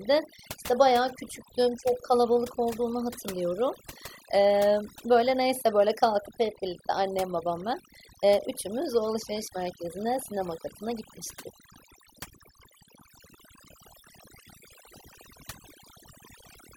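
From start to finish, the background between phrases collapses into near silence scattered with twinkling specks. That is overdone noise removal: the reduction was set so strong that frequency bands near the estimated noise were cut almost to nothing, taking the softer parts of the voice with them.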